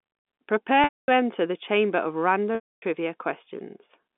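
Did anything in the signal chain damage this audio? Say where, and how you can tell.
Yes. The damage is at the network stage: packet loss with pitch repetition. At 0.84 s the sound holds a repeated buzzy period, fades over about 50 ms, and goes silent until 1.08 s. It returns with a short cross-fade just before "enter the chamber of". The same happens from 2.55 to 2.82 s, right after "enter the chamber of". The gaps last 240 and 270 ms, which points to several consecutive lost packets. The receiver bridged each gap by looping the last pitch period. The band-limited G.711 telephone coding is audible beneath the loss.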